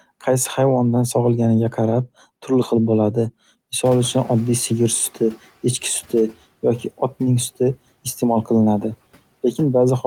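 At 3.85 s the background room noise jumps by about 17 dB, somewhere around 4 seconds in, and you can hear the noise suppressor catching up. Its noise estimate is still tuned to the quieter floor, so the new noise comes through with little reduction at first. After the rise the room noise sits roughly 23 dB under the speech. Over the next 1.67 s, until 5.52 s, the estimate adapts and the noise sinks by about 11 dB.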